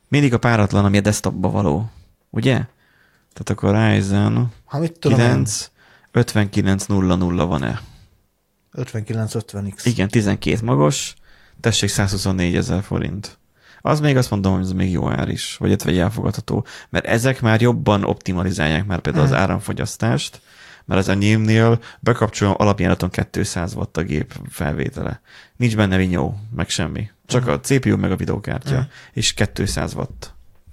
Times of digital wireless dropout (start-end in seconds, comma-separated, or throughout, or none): none